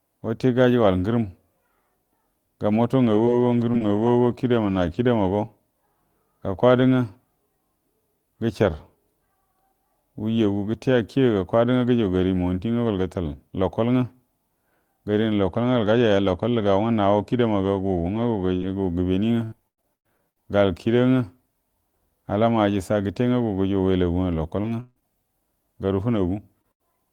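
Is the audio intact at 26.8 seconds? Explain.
No, 26.8 s sits inside a burst of packet loss from 26.72 to 26.82 s: about 80 ms went missing, papered over by a fading copy of the preceding speech.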